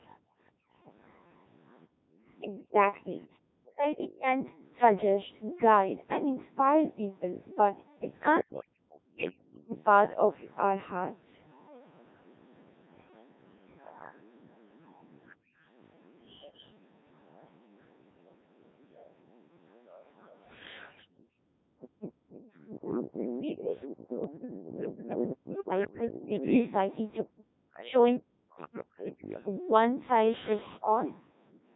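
The whole clip has been through the Codec 2 vocoder, and the damage is heavy. The decoder rebuilds the voice from sine waves driven by pitch, voicing, energy and a coarse spectral envelope, so the original waveform is gone. The result is a robotic, buzzy voice, and the sparseness fits the 1.3 kbit/s mode. The lowest bass is taken out by the call microphone path's high-pass filter, which is normal, and it stays that way throughout.

From 0.04 s to 31.65 s a second, fainter voice sits under the main talker, about 15 dB down. This is likely the other side's voice leaking through: the far end was played on a loudspeaker, and the echo canceller left part of it in the microphone signal.

Between 0.18 s and 2.13 s the background is gated by the echo canceller. The room sound drops away by up to about 39 dB, for well under a second in total, and returns when the canceller releases. Shorter gating follows at 15.36 to 15.53 s, with a drop of about 37 dB, and at 27.63 to 27.73 s, with a drop of about 40 dB. 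A longer one runs from 21.07 to 22.31 s, about 38 dB deep and roughly a second in total.

Bit errors on digital voice radio hit at 0.82 to 0.92 s, 16.44 to 16.58 s, 22.44 to 22.57 s and 25.88 to 26.26 s. Error rates are a few percent up to around ten percent. In a vocoder this lean, every flipped bit corrupts the pitch, level, voicing or envelope of a whole frame. Each burst is heard as sudden pitch and level jumps, warbles and robotic gibberish. The longest burst, near 26 s, points to about seven frames being corrupted.

From 2.41 to 4.29 s and again from 8.43 to 9.78 s, the main voice dips sharply, by as much as about 40 dB. The total loss is under a second in the first stretch and about a second in the second. The cause is likely speech suppressed in double talk: with both sides active, the canceller could not separate its own talker from the loudspeaker echo and attenuated both.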